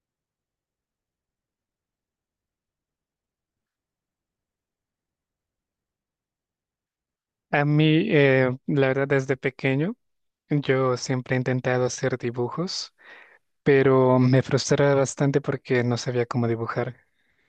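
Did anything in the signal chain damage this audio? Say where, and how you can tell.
No, nothing audible in this speech recording points to damage at any stage of the signal chain.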